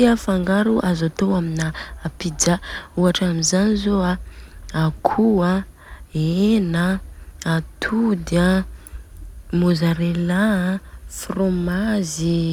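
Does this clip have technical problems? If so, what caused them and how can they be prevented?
No, there are no technical problems in this recording.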